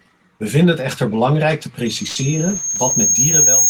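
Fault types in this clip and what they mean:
Loudspeaker feedback squeal: From 1.86 s, just after "het echter belangrijk te", a single tone at 6.5 kHz swells steadily over about two seconds and ends up a few dB louder than the speech. The microphone is picking up its own loudspeaker, and at that frequency the loop gain is above one, so the tone feeds itself. A fixed interference whistle would sit at a steady level, but this one grows and keeps going until the clip ends.
Burst of packet loss: Between 2.07 and 2.18 s, also after "het echter belangrijk te", about 80 ms of sound is missing. The receiver fills the gap by stretching the last fragment it got and letting it fade, in place of the speech. When the audio comes back, it picks up further along, with the lost part skipped. A simple dropout would leave plain silence, and this gap is filled with a decaying copy of the last sound.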